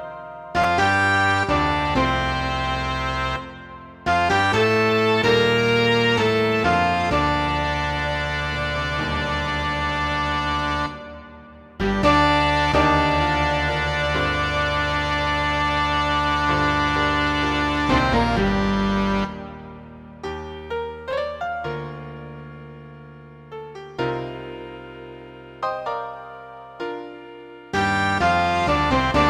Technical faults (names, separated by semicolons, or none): chunks out of order